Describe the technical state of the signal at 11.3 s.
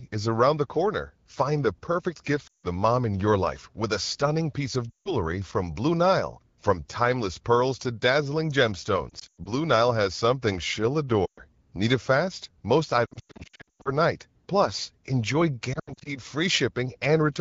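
At 11.3 s the sound drops to near silence within two frames, then returns briefly weak or rough, from 11.25 to 11.42 s. These are lost AMR speech frames. The decoder repeated its last good settings with falling gain across roughly 120 ms, which fits a run of six frames.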